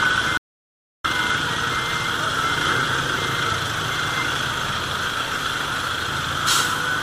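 At 0.38 s the sound cuts out abruptly, and it returns mid-flow at 1.04 s. This is an audio dropout to silence lasting about 0.67 s. The gap is silent with no room tone. The input was likely lost while recording continued, and that material is gone.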